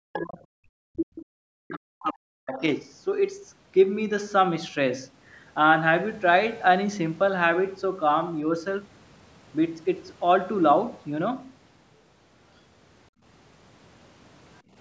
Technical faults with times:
0.00-1.16 speech suppressed in double talk
1.17-1.21 other side's voice leaking through
1.57-2.62 speech suppressed in double talk
2.54-2.79 other side's voice leaking through
13.10-13.22 background gated by the echo canceller
14.62-14.75 background gated by the echo canceller

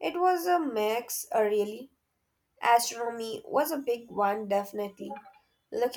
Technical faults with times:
none

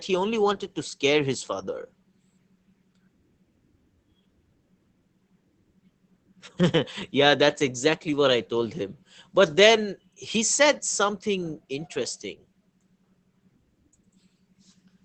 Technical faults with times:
0.00-15.05 Opus voice compression

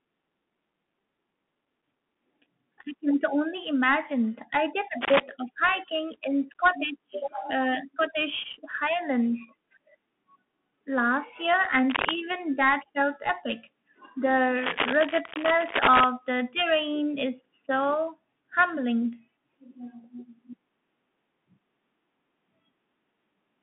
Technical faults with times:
0.00-23.63 Bluetooth CVSD headset codec
5.01-5.20 cable scratch noise
11.90-12.14 cable scratch noise
14.58-16.04 cable scratch noise

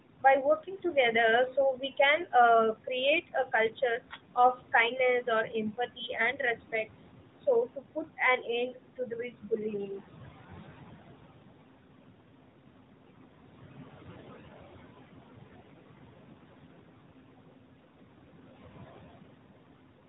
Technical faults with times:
0.00-20.09 noise suppressor artifacts
0.63-1.13 speech cut by the noise suppressor
1.76-2.33 speech cut by the noise suppressor
3.27-4.74 speech cut by the noise suppressor
5.48-6.40 speech cut by the noise suppressor
7.76-10.01 speech cut by the noise suppressor

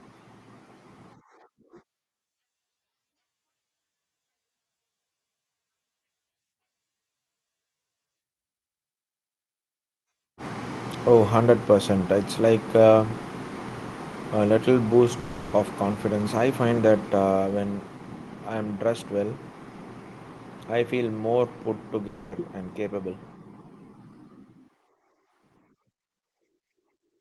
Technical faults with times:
15.19-15.54 long network dropout
22.07-22.34 long network dropout

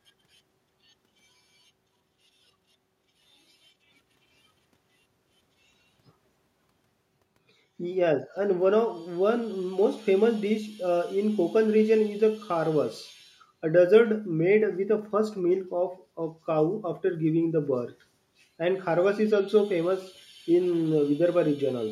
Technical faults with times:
none

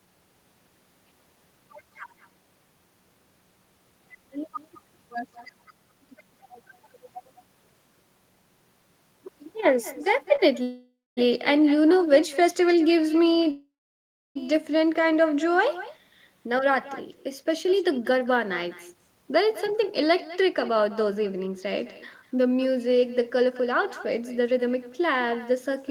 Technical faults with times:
0.00-25.91 echo with no canceller
10.36-10.41 short stall from a late packet
10.63-11.19 call audio freeze
13.51-14.37 call audio freeze
16.46-21.47 jitter buffer speed-up
22.22-22.69 jitter buffer speed-up
23.50-25.90 jitter buffer speed-up

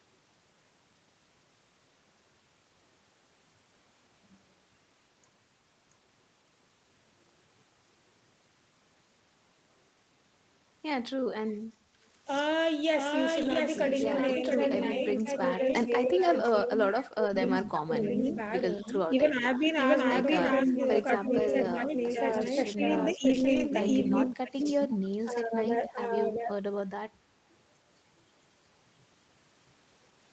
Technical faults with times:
0.00-30.33 doubled audio track
11.47-11.58 echo leak
11.62-11.79 speech suppressed in double talk
13.37-13.55 lost packet rebuilt from error correction
14.40-26.54 speech suppressed in double talk
15.69-15.75 lost packet rebuilt from error correction
17.27-17.37 lost packet rebuilt from error correction
18.03-19.68 echo leak
23.19-23.65 lost packet rebuilt from error correction
24.11-25.87 echo leak

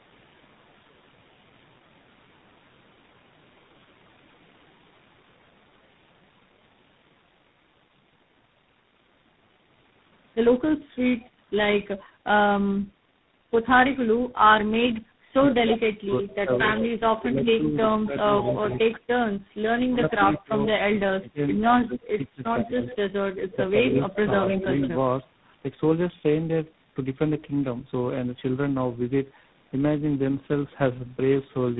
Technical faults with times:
0.00-31.80 tandem speech coding
15.60-24.92 speech suppressed in double talk
20.10-20.64 echo leak
21.98-24.88 echo leak

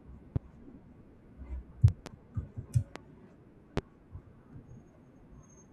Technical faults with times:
0.36-0.39 loud pop
1.88-2.09 loud pop
2.96-2.99 loud pop
3.77-3.80 loud pop

